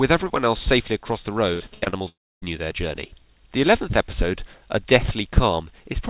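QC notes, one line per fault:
1.54–2.02 s, repeated packet loss (robotic sound): six quick gaps, longest 82 ms, each patched by carrying the last sound on, so the stretch turns choppy and robotic.
2.08–2.44 s, long network dropout: the sound smears on briefly, fades to silence, then audio returns with that chunk missing, likely from a network dropout.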